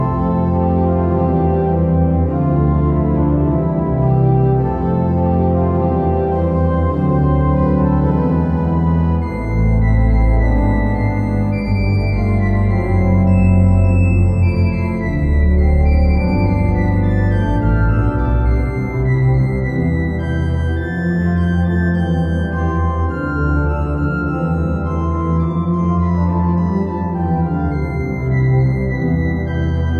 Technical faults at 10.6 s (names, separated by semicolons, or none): none